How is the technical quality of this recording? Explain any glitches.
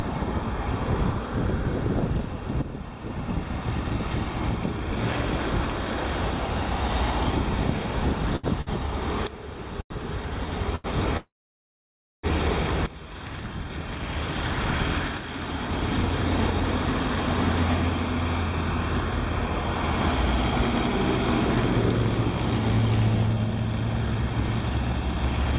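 The recording has three network-related glitches. It is band-limited with nothing above 4 kHz, which fits a narrowband call codec such as G.711 at 64 kbps.

From 8.36 to 10.87 s there are repeated stalls (stutter). The jitter buffer ran dry four times, and the receiver stretched the last sound to cover each gap. Together the gaps fill about 305 ms, roughly 12% of that span, and the longest is 92 ms. Nothing is lost, but the audio drags and hiccups.

From 11.17 to 12.26 s there is a call audio freeze. The sound stops and is held for about 1.06 s, 960 ms of which is silence, before resuming where it left off. The likely cause is a burst of delayed packets emptying the jitter buffer, which inserts a gap without dropping any audio.

From 22.05 to 25.53 s a jitter buffer speed-up runs the audio at about 109% speed. Playback sounds hurried while the pitch stays unchanged. The receiver trimmed short pitch-period segments, roughly a third of a second in total, to shrink the excess delay.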